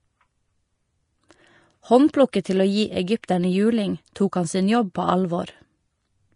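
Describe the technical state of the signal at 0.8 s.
At 0.8 s, as across the whole clip, the speech sounds hissy and grainy above a sharp ceiling near 10.6 kHz. Unlike a plain low-pass, the treble that remains is roughened into noise, likely Vorbis compression at a low bitrate around 33 kbps.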